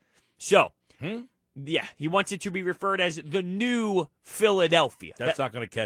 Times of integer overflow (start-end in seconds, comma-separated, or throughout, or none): none